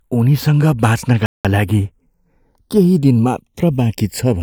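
From the start, the two channels show channels drifting apart: they were captured on separately clocked devices that disagree by roughly 150 parts per million, so the inter-channel delay creeps up to around half a millisecond by the end. Summed to mono, the comb notches slide slowly through the spectrum, giving the speech a gentle, slow flanging sweep.

At 1.26 s a playback stall cuts the sound off mid-flow, leaving silence until 1.45 s, about 190 ms, before the speech resumes. The likely cause is the player running out of buffered data or its audio thread being blocked.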